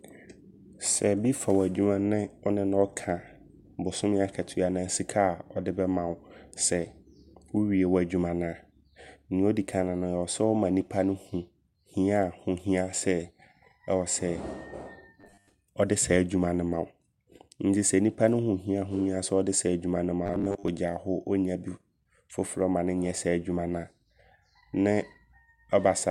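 From 15.21 to 15.52 s and 20.26 to 20.68 s, robotic sound from repeated short buffers gives a metallic 100 Hz buzz. It is likely a looped 10 ms buffer, and shows as rigid, evenly spaced harmonics and identical repeating waveform cycles.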